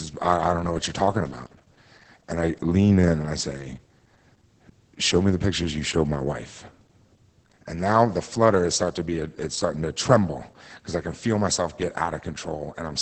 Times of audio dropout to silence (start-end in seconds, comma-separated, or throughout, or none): none